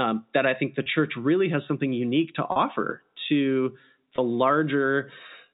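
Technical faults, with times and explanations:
0.83 s, 2.52 s and 4.16 s, packet loss with pitch repetition: gaps of 30, 40 and 20 ms, consistent with 10 ms packets, are bridged by repeating the last pitch period, giving a brief held, buzzy sound within the G.711 telephone band.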